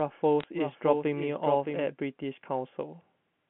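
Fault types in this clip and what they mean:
Doubled audio track: The speech has a second copy of itself running underneath, trailing by about 0.7 s and roughly 5 dB quieter. It's full-band, with no decay or room colour, so it isn't an echo. It's already going when the clip starts and cuts out abruptly at 1.84 s. The likely cause is the same signal being picked up again through a slower path, or an edit that left two copies out of step.
Bit errors on a digital phone line: Between 0.40 and 0.44 s there's a short burst of sharp ticks and crackle sitting on top of otherwise intact speech. That's what happens when bits get flipped on the G.711 link. Each error corrupts a single sample, and hits on the upper bits, or on the sign of a loud sample, jump the waveform enough to click. The error rate here works out to a small fraction of a percent, concentrated in that brief window. The line itself still passes its usual 150 Hz to 3.4 kHz band.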